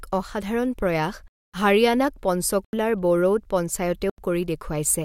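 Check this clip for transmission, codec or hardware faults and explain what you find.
Three blocks of digital silence cut the speech: 1.28 to 1.54 s (256 ms), 2.65 s and 4.10 s (85 ms each, fitting a 4096-sample buffer left unfilled). Abrupt cuts with no fade, not concealed, distinguish them from packet loss.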